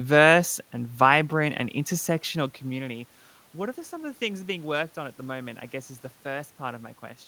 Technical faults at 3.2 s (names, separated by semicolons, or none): none